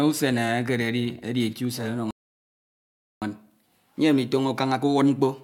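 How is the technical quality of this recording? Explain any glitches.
The speech has one clear glitch, a playback stall. From 2.11 s to 3.22 s the audio drops out completely for about 1.1 s, cutting off mid-flow, then carries on. The likely cause is the player running short of buffered data, or its playback thread being blocked, so nothing reached the output until it caught up. On a waveform this shows as a flat line between two abrupt edges; on a spectrogram it is a blank vertical band across all frequencies.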